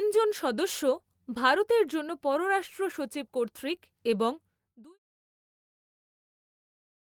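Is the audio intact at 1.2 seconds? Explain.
Yes, the audio is intact at 1.2 seconds, with the speech running cleanly through that moment and no dropout, click or distortion.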